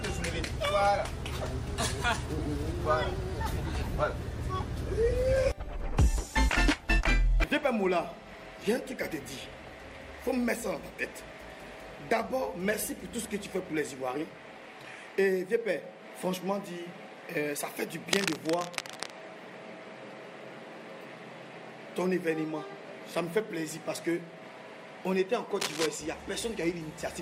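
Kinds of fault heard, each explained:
cable scratch noise: Two bursts of dense, uneven scratching sit over the sound, from 18.12 to 19.11 s, a little quieter than the sound itself, and from 25.60 to 25.86 s, roughly as loud as it. This is likely a worn cable or connector being moved so that its contact resistance jumps about rapidly. Unlike separate clicks or sparse crackle, it forms a continuous rustling texture, and unlike a dropout, the sound beneath keeps playing.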